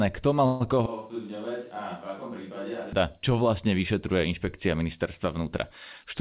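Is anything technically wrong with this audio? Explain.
Yes, there are two faults, heard through a call path whose band stops at 4 kHz, which fits G.711 A-law at 64 kbps.

From 0.46 to 0.75 s there is a call audio freeze. The last sound stretches into a fading buzz for about 140 ms, likely from a starved jitter buffer. The speech then resumes with nothing lost, unlike a dropout.

From 0.86 to 2.93 s the audio switches to a distant microphone. It abruptly turns hollow and roomy, about 10 dB quieter, with room noise about 35 dB below the speech, likely because the close microphone failed. The sudden change in and out distinguishes it from a gradual gain drift.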